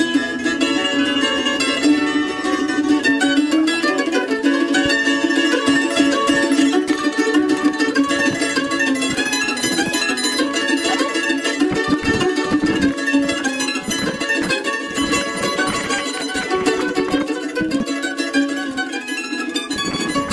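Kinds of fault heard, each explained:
Wrong sample rate: The whole clip plays 1.5 times too fast and about 7 semitones high. That fits 16 kHz audio played at 24 kHz without conversion.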